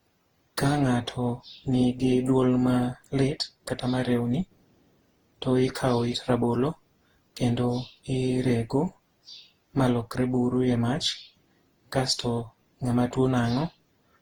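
Throughout, generation loss leaves the speech swirly and hollow with blurred onsets, likely from repeated re-encoding. The spectrogram shows smeared transients below 20.2 kHz.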